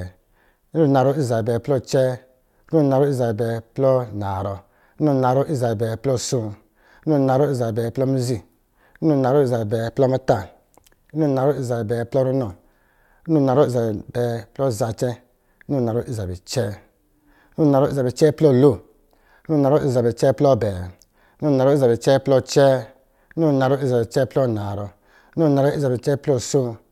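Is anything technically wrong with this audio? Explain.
Yes. Three sharp clicks occur in the speech, at 7.85 s, 23.64 s and 24.71 s. Each is most likely dropped samples: a fraction of a millisecond of the stream goes missing, so the waveform jumps straight from one value to a later one. The gap is far too brief to take out any audible sound, so the discontinuity is heard only as a single tick. On a waveform it shows as a small step; on a spectrogram, as a thin vertical line spanning the frequency range.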